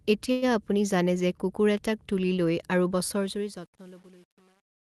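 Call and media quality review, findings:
Call audio freeze, 0.31–0.45 s: the last sound is held as a fading buzz for about 106 ms, then the audio resumes exactly where it stopped. Likely cause: the jitter buffer ran dry while packets were delayed. Unlike packet loss, nothing is skipped. The stall adds about 106 ms of delay, and there is no silent gap.

Truncation distortion on a fade, 3.12 s to the end: the fade-out turns gritty and steppy, and is worst from 3.41 s. Probable component is an undithered gain or fade stage, and the grain fits roughly 8-bit resolution. It differs from Opus coding noise at 32 kbps because the grit gets worse as the level falls.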